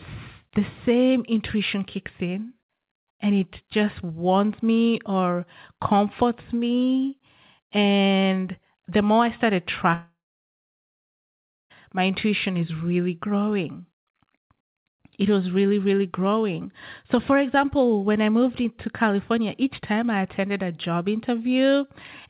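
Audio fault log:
9.94–11.72 s, long network dropout: audio packets likely stopped arriving for about 1.76 s, so that stretch of the stream was never received or played. Right after "the more I started" the receiver carries the last sound on as a short buzz or hiss that fades away, leaving about 1.55 s of silence. The audio then resumes at "my intuition is really", and the lost portion is simply absent rather than delayed.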